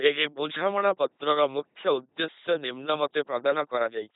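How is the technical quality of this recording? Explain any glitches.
Poor quality: the speech has been through an LPC-10 vocoder for the whole clip. Each moment is resynthesised as either a pulse-driven buzz or noise through a short filter, giving a mechanical robot voice with no content above about 3.9 kHz. The result fits a 2.4 kbit/s coder. Unlike ordinary low-bitrate codec smearing, the natural voice is gone entirely, with stray buzzes or hiss where voicing is misjudged.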